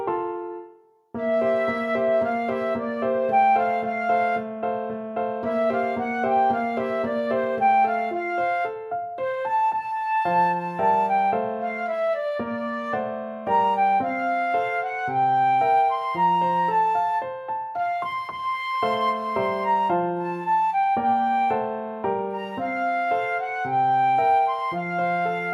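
No technical faults can be heard anywhere in the recording. Nothing in the audio calls for a timestamp or an explanation.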